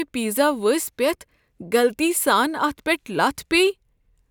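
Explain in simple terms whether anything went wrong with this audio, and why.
Nothing went wrong here; the speech comes through with no glitches, dropouts or odd noises to point to anywhere along the way.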